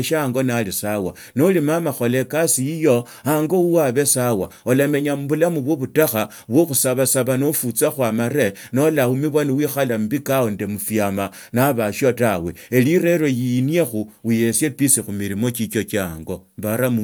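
Listening to this speech recording, nothing technical stood out at any point.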